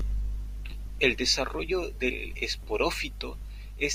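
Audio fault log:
No faults are audible anywhere in this speech recording.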